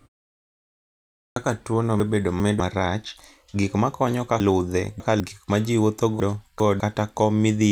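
At 1.26 s, the sound starts abruptly after 1.26 s of silence. This is a clipped start after a pause. The output device had gone idle and took time to wake. About 100 ms of the onset is lost, so the first sounds are missing.

Chunks out of order follow, three times. From 2.0 to 2.6 s, just before "marach gik makonyo", a 200 ms chunk plays two chunks late. From 4.4 to 5.2 s, between "marach gik makonyo" and "gik ma ji wuotho", one plays three chunks late. From 6.2 to 6.8 s, after "gik ma ji wuotho", one plays two late. Nothing is lost, but each spot sounds jumbled.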